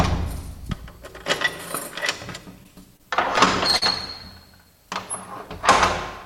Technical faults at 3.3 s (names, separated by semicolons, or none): repeated stalls (stutter)